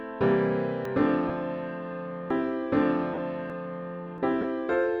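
At 0.85, 2.30, 3.50 and 4.18 s the capture side likely fell behind and a dropped buffer (overrun) occurred. Unread samples were overwritten and the two sides spliced. Each is heard as the sound jumping forward by roughly a tenth to a sixth of a second, with no gap.

Interleaved with these, at 1.28 s, 3.14–3.18 s and 4.41–4.44 s, lost LE Audio frames (15, 37.5 and 30 ms) were concealed by the decoder repeating the last spectrum with scrambled phase. Tonal content briefly turns into a hissy smear.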